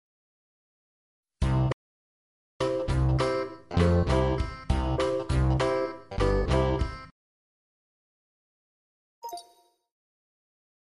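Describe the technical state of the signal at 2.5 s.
At 2.5 s the signal sits inside a playback stall that runs from 1.72 s to 2.61 s, about 0.88 s of silence. The sound stops abruptly in mid-flow and stays dead for that whole span before carrying on. The likely cause is the player starving: either its supply of audio data ran dry or its output thread was held up, so nothing reached the output until it recovered at 2.61 s.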